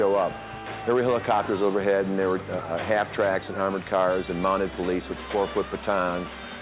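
No technical faults are audible.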